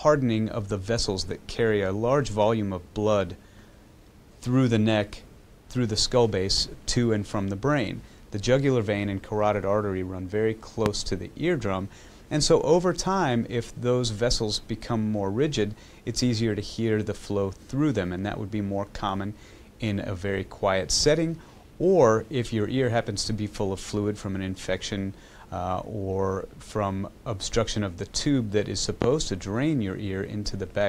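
At 10.86 s a loud pop lands on top of the audio. It lasts about 40 ms and peaks around 20 dB above the surrounding sound. A second loud pop follows at 29.02 s, also about 40 ms long and roughly 15 dB above the signal. Each is a single sharp burst, and the sound carries on beneath it. The likely cause is a sudden voltage step or pulse from a plug, a switch, static or a driver glitch.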